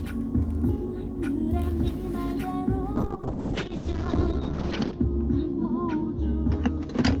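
At 2.97 s a call bitrate drop sets in and lasts to the end. The bandwidth estimate fell, and the encoder had to code with far fewer bits, consistent with a fall from around 32 kbps to roughly 6 kbps. Content above 8 kHz disappears and the everyday sounds turn watery and rough, worst for about 1.95 s. Unlike packet loss there are no gaps or repeated fragments. Unlike a simple filter, the coarse, grainy texture comes with the dulling.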